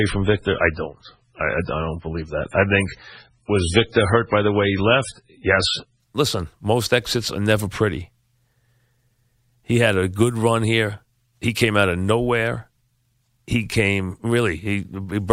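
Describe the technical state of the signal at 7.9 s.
At 7.9 s the speech signal is intact, with no dropout, clipping, glitch or other fault audible at that moment.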